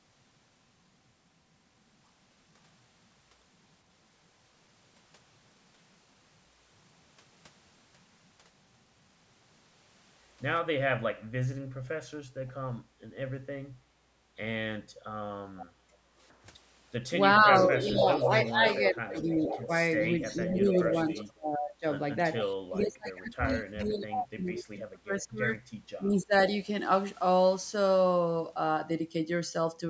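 Echo leak at 15.57 s, then 17.38–18.51, 19.16–21.25 and 22.36–22.84 s: a copy of the speech trailing by 0.47 s, faint to nearly as loud, likely the far loudspeaker's echo escaping its canceller. Background gated by the echo canceller, 15.8–16.16 s: room sound dips about 13 dB for roughly a third of a second while the canceller clamps the microphone. Speech suppressed in double talk, 17.45–21.85 and 22.68–26.32 s: speech drops up to around 20–25 dB in pieces, likely the canceller muting both talkers during overlap.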